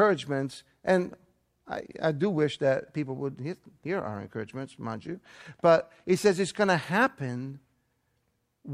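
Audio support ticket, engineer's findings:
No technical faults detected.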